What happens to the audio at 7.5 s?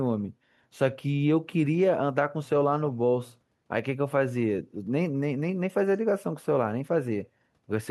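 Nothing goes wrong at 7.5 s; the speech runs on intact through that moment, with no dropout, glitch or distortion to be heard.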